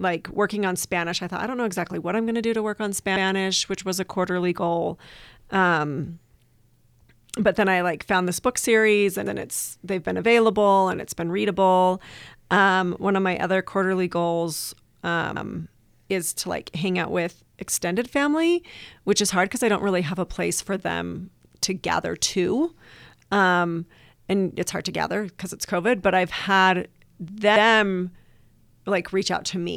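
Overlapping chunks at 3.16, 9.26, 15.36, 21.46 and 27.56 s: each 6 s chunk starts early, so 100 ms of speech repeats as a stutter.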